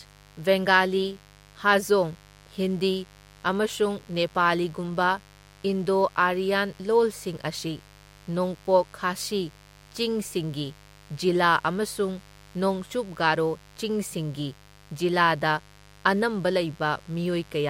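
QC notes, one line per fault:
Throughout, mains buzz: a steady, raspy buzz sits under the speech for the whole clip, about 25 dB below it. It's locked to 50 Hz mains, and the rasp comes from sharp switching spikes, likely from a dimmer, a rectifier or a missing shield, landing twice every cycle, which stacks up harmonics of 50 Hz well into the kilohertz range rather than giving a clean low hum.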